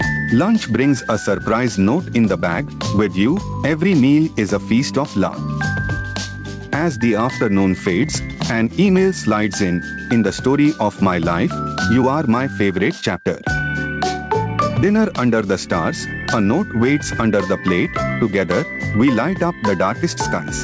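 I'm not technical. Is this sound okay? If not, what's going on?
No. Gain pumping runs throughout, likely from the level being set too high. Unlike a noise gate, it never cuts to silence.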